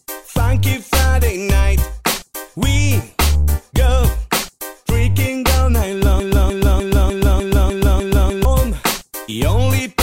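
At 6.20 s the audio locks into a broken-record loop. A 0.30 s fragment repeats exactly, back to back, eight times until 8.45 s, giving a rigid stuttering pulse at roughly three repeats per second. The likely cause is a stall in the player, encoder or stream that kept re-sending the last buffered fragment. Whatever sound should have played across those 2.25 s is missing; normal playback resumes only once the loop releases.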